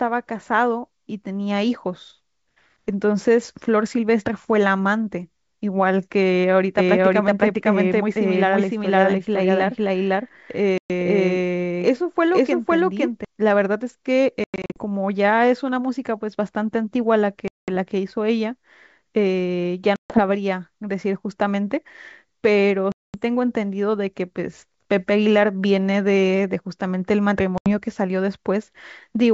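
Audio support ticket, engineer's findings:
Doubled audio track, 6.79–13.25 s: full-band copy trailing about half a second at near-equal level, abrupt on/off. Likely a second capture path or misaligned edit. Spectrogram shows every pattern repeated, horizontally offset.

Packet loss on an ADPCM call at 10.78, 14.44 (scattered over 0.32 s), 17.48, 19.96, 22.92 and 27.58 s. Hard-edged silent gaps of 80–220 ms show as waveform flatlines and blank spectrogram columns. After each gap speech returns slightly distorted while the decoder's predictor resyncs.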